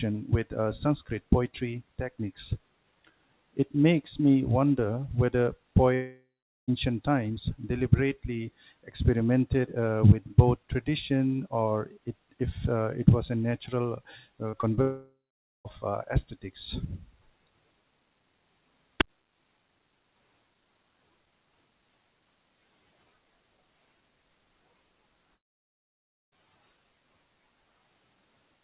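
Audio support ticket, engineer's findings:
Long network dropouts, three. 5.94–6.70 s, after "makes me wonder whether", resuming at "times deliberately experimented uh": about 0.74 s lost, a fading buzz, then about 0.42 s flat silence. Likely network loss. 14.81–15.67 s, resuming at "uh aesthetics": about 0.84 s, same fade, then about 0.51 s silence. Likely packet stream interruption. 25.35–26.38 s: about 0.98 s dead air, no fill. Likely link stall. Spectrogram shows a decaying smear into a blank column; waveform a tapering tail, then flatline.

Short concealed packet loss, three, clustered after "it was a natural". At 14.50–14.55 s (about 40 ms), 14.61–14.65 s, and 14.75–14.79 s (about 20 ms each), the jitter buffer concealment extended the prior pitch or noise, then crossfaded back. The result is audible as brief wobble/smear. Spectrogram shows frozen, stretched harmonics for a few hundredths of a second; waveform shows repeated periods with no amplitude break. 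Running directly into the second dropout. Band-limited to 4 kHz throughout, consistent with G.711 mu-law at 64 kbps.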